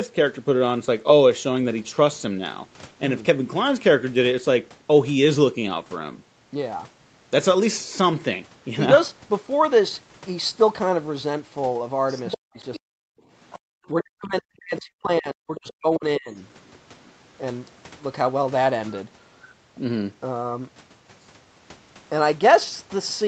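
From 12.08 to 12.38 s, the other side's voice leaks through at about 10 dB below the talker. The likely cause is a far-end loudspeaker signal that the echo canceller failed to remove. Brief scraps return at 12.74 to 12.80 s and 13.50 to 13.59 s, both around 20 dB down. Speech is also suppressed in double talk from 12.37 to 13.13 s and again from 13.88 to 16.30 s. The likely cause is the canceller mistaking the talker for echo and attenuating both, so the voice drops deeply, very roughly 40 dB. It is affected for about half a second in the first span and about two seconds in the second.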